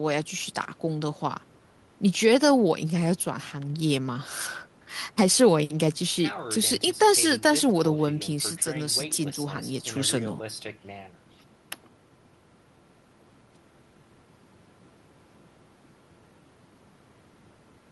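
No technical faults can be heard anywhere in the speech recording. Nothing in the audio marks a point in time that needs attention.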